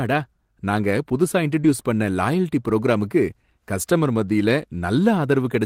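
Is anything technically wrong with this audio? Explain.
Yes. From 1.61 to 1.67 s a brief smear interrupts the speech: short concealed packet loss, where about 20 ms never arrived and the decoder extended the preceding sound before blending back in.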